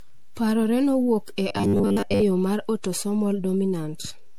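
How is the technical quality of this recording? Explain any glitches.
The technical quality is poor: three faults affect this speech recording.

Throughout, a DC offset shifts the waveform away from zero by a constant. It isn't audible, but it wastes headroom and adds steady energy at the lowest frequencies.

Throughout, generation loss is likely: the speech was apparently re-encoded around seven times as MP3 at 96 kbit/s. It sounds swirly, smeared and hollow, with blurred attacks.

From 1.49 to 2.23 s, between "nowuok e" and "yo mar autosomal", there is robotic sound from repeated short buffers. The likely cause is audio arriving too seldom, so the software repeats the last fragment and skips most of the real signal. The speech becomes a rigid, metallic 100 Hz buzz, which fits a repeated 10 ms buffer.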